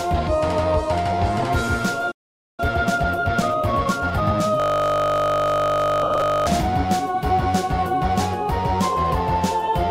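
At 2.11 s the sound cuts out into silence for about 0.47 s, until 2.60 s. This is a playback stall. The player likely ran out of buffered data or had its thread blocked. Output simply stopped, then resumed.

From 2.60 s to 4.46 s comes time-compressed catch-up. The player works off its backlog by removing small slices and cross-fading the joins. The audio runs at 1.25 times normal speed. Pitch stays the same.

At 4.60 s a system hang loop begins and lasts until 6.47 s. The machine or driver froze while the sound hardware kept replaying one ring buffer. A 20 ms piece repeats exactly, about 90 times. At 50 Hz it becomes a steady buzz.

Between 6.03 s and 6.22 s, inside that buzz, come lost LE Audio frames. About 100 ms of audio goes missing across 180 ms, which fits ten 10 ms frames. The longest gap is around 70 ms. The LC3 decoder reuses the last spectrum with randomised signs. Tones smear into noise and fade down through the longer gap.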